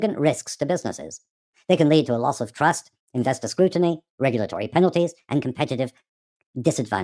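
From the first moment to the last, the speech runs fast and sits high, the classic sound of a wrong sample rate. The audio was captured at 16 kHz but is being played back at 22 kHz with no conversion in between. Everything gets squeezed in time by a factor of about 1.38, and pitch climbs around 5.5 semitones along with it. That's why the voice comes across chipmunk-ish and hurried, with the timing and the pitch shift tied together.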